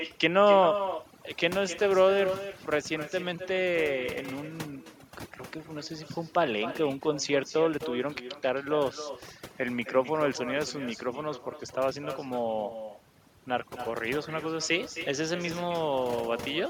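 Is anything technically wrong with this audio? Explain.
Yes. Two faults run through the whole speech clip.

Overdone noise removal is present from start to finish. A noise reduction stage was set too hard. It pulls individual frequency bands down or out whenever they sit close to its noise estimate. Quiet parts of the voice get caught along with the noise. The background drops away and breaks up into twinkling specks.

An echo with no canceller also runs throughout. The far end plays the call through a loudspeaker. Its microphone picks that sound up and sends it back, and nothing removes it. Every phrase returns roughly a third of a second later, at about 11 dB below the speech. The copy sounds quieter and thinner. It shadows the voice continuously.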